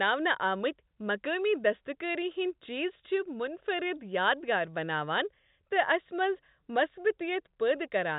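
No technical faults are audible.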